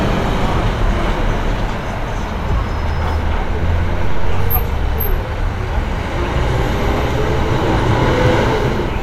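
Dropped samples at 2.89 s and 8.26 s break this recording of sounds with two single sharp clicks. At each point, a tiny fraction of a millisecond of the stream is likely missing, so the waveform jumps abruptly to a later value and leaves a thin vertical line across the spectrum.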